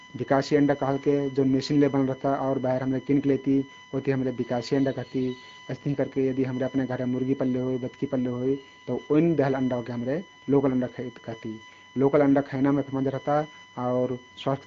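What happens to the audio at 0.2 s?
At 0.2 s the speech carries a USB whine that runs through the whole clip: a steady tone on a 1 kHz grid, strongest at 2 kHz, roughly 25 dB below the speech. It comes from the bus's 1 ms frame timing leaking into power or ground. Its kilohertz spacing sets it apart from mains hum's low 50 or 60 Hz buzz.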